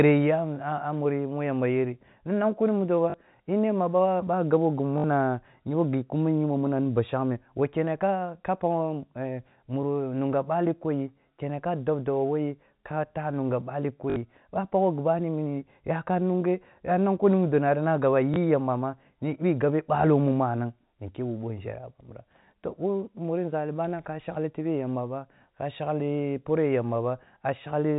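Packet loss with the last packet repeated occurs at 3.10–3.14 s, 4.98–5.04 s, 14.10–14.16 s and 18.34 s, lasting 20 to 60 ms and consistent with 20 ms packets. Each gap is filled by replaying the previous chunk, giving a brief robotic stutter, or a small blip for the single lost packet at 18.34 s, over the G.711 telephone-band speech.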